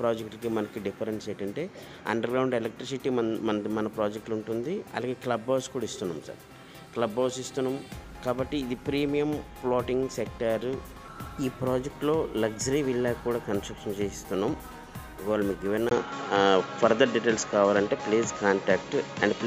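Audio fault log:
15.89–19.46 s, input switched to a poorer device: at 15.89 s the sound drops out for a 20 ms gap and returns duller and boxier, with nothing above 7.6 kHz, a level shift of around 5 dB and a faint new noise floor sitting far below the signal. The abrupt change in bandwidth, tone, level and background, with a brief silence at the join, likely comes from the input moving mid-recording to a narrower-band microphone or headset path, which stays in use to the end.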